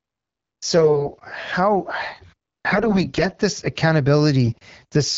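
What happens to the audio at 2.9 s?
From 2.71 to 3.27 s the audio carries AMR bit errors. Across that half second, a few percent of the less protected bits in each AMR-WB frame arrive flipped, so excitation pulses land in the wrong places and the fine pitch, gain and spectral values go astray. The sound keeps roughly its pitch and level but turns hoarse, scratchy and gargly. On a spectrogram the harmonics smear into noisy, broken striations; the waveform's envelope stays similar but looks ragged.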